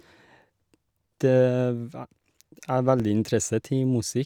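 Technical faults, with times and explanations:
0.86–4.06 s, clock drift buffer slips: likely two devices running on separate clocks several hundred ppm apart, so a few tens of samples are dropped or repeated every 1.06 s. The resulting splice breaks the waveform, giving four evenly spaced clicks during the speech.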